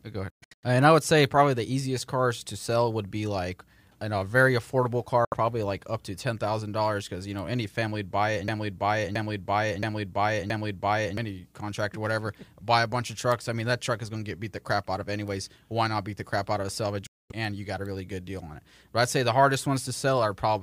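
Right at the start, from 0.30 to 0.64 s, the speech breaks into several short holes, the longest about 0.12 s, then cuts out again from 5.25 to 5.34 s after "in a very affordable" and from 17.07 to 17.32 s after "out of a salvage". Each time the audio comes back further along, as if it had kept playing. That's a Bluetooth dropout, likely from packets not reaching the headphones in time.

From 8.48 to 11.17 s, just after "family would buy it", a 0.67 s chunk repeats four times back to back before the speech picks up at "contractor whatever buy a". That's a broken-record loop, likely a stalled stream resending its last fragment, and whatever should have played in that stretch is lost.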